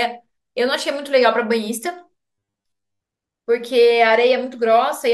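From 2.29 to 3.08 s the speech turns into robotic sound from repeated short buffers. A rigid, metallic buzz at 100 Hz runs through it. Most of that stretch is repeats. The likely cause is late audio, patched by looping the last 10 ms while real audio is skipped.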